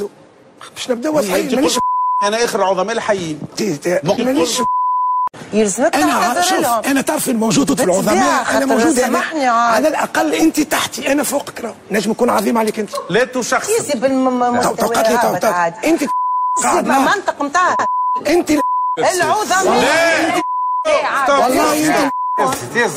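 At 7.69 s and 17.79 s, overlapping chunks cause a stutter. Each 10-second chunk starts early, so 100 ms of audio plays twice at every join.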